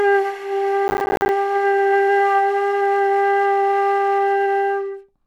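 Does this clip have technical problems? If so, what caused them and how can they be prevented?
Yes. From 0.88 to 1.29 s there is processor overload crackle. The sound breaks into a rapid, gritty tearing. Each dropout is a tiny hole of silence with hard edges. The spacing suggests short buffers of around 10 ms. Roughly twenty of them miss their deadline. The processor could not finish each block in time. The crackle stops when the load eases. To prevent it, use a larger buffer or reduce other processing load while recording.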